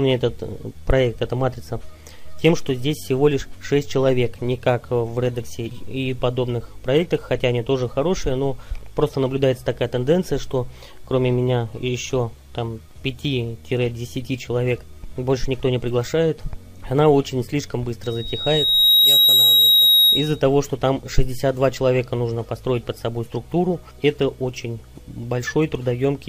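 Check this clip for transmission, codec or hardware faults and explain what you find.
One hardware fault is present. From 18.03 to 20.42 s, a loudspeaker feedback squeal occurs: the microphone re-amplifies its own loudspeaker, and a 3.8 kHz tone swells over about a second to roughly 10 dB above the signal.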